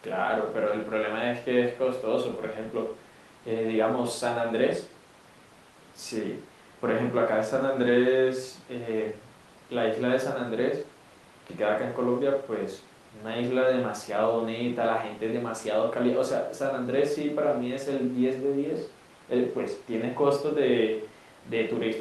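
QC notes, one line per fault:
No faults heard.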